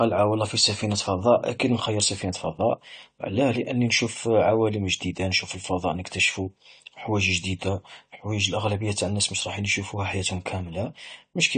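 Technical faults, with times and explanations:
Throughout, AAC compression: nothing is present above 9 kHz, and the speech sounds dull and smeared, with a watery, warbling texture on sustained sounds and a fizzy, unstable quality on sibilants. This is likely aggressive AAC-LC coding at a low bitrate, around 32 kbps, where coarse quantisation leaves gaps in the spectrum. A plain low-pass filter would only darken the sound, but here the swirling, time-varying artefacts below the cut-off show that lossy coding is at work.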